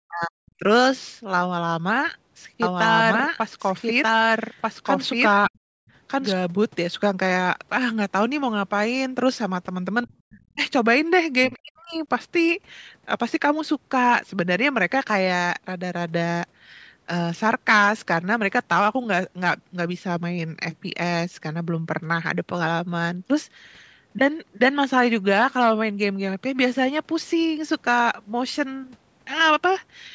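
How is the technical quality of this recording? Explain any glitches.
The recording has several echo-canceller problems and a doubled-track section, all in its first 12 seconds. The band stops at 8 kHz, consistent with normal call processing.

Speech suppressed in double talk occurs at 0.04–0.64 s, 5.47–5.54 s, 10.06–10.12 s, 10.28–10.6 s and 11.48–12.01 s. The speech dips by around 40 dB, or about 20 dB at 10.06 s, for stretches of roughly half a second down to a few tens of milliseconds. The likely cause is the canceller mistaking the talker for loudspeaker echo while the far side was also active, and attenuating both. On a waveform the envelope collapses abruptly. A spectrogram shows a full-height gap or a sharp fade across all frequencies.

A doubled audio track runs from 2.62 to 6.32 s. A second full-band copy trails the original by about 1.5 s at roughly equal level, so each phrase is heard twice, overlapping the next. 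It likely comes from a second, slower capture path being mixed in. It has no reverberant tail or room colouring, and it begins and ends abruptly. A spectrogram shows the same harmonic patterns repeated about 1.5 s later, with hard vertical edges at the section boundaries.

Background gated by the echo canceller appears at 5.82–5.89 s. The room tone drops by about 40 dB for roughly 70 ms, then returns. The canceller clamped the microphone hard while the loudspeaker was playing and released it almost at once. The effect is a brief hole in the ambience, heard as a tiny dropout. On a spectrogram the noise floor vanishes in a narrow vertical strip. The waveform shows a short near-silent notch.

The other side's voice leaks through at 10.03–10.07 s and 10.31–10.43 s. The echo canceller likely failed to remove the far-end signal played from the device's loudspeaker. The residue is faint, about 30–35 dB below the main speech. 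It sits right beside the double-talk dips around 10 s. A spectrogram shows weak, broken harmonic traces unrelated to the main talker's pitch contour.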